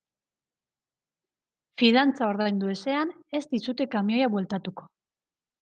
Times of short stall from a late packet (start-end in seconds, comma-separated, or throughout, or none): 2.41-2.60